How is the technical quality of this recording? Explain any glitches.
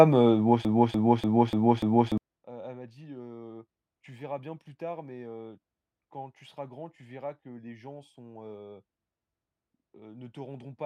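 One glitch stands out in this speech recording. Broken-record loop, 0.65 to 2.18 s: after "heu bon", a 294 ms fragment repeats five times, likely a stalled stream resending its last piece, so the audio meant there is lost.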